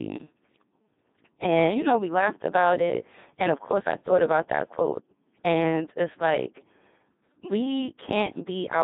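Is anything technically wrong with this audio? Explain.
Yes. Throughout the speech, Codec 2 vocoder damage is heavy. Only pitch, voicing, energy and envelope survive, consistent with about 2.4 kbit/s, then rebuilt as sine waves. The result sounds buzzy and robotic, with a spectrogram showing rigid harmonic stripes confined to 200 Hz to 3.7 kHz.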